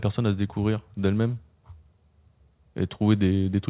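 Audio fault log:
Nothing stood out on listening to this speech, which comes over a call line with nothing above 4 kHz.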